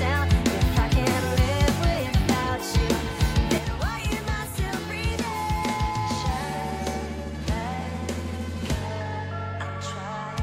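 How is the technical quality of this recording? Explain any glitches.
The recording has one clear fault: a sudden, lasting drop in level partway through.

At 3.58 s the overall level falls abruptly by about 6 dB and stays down until the end of the clip. The likely cause is one channel drops out: one side of a stereo pair stops delivering signal. Material shared by both channels loses half its contribution in the mono sum, hence the 6 dB step, and anything carried only on the lost side vanishes entirely, so the sound turns quieter at once.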